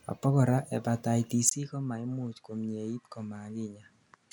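At 1.49 s the sound cuts out for a brief 20 ms gap. It then returns duller and boxier, and stays that way to the end. Nothing above 11.4 kHz remains. The level drops by roughly 10 dB. A faint new background noise appears, around 40 dB below the speech. The likely cause is an input switched to a poorer device mid-recording, with a narrower band, its own tone and its own noise floor.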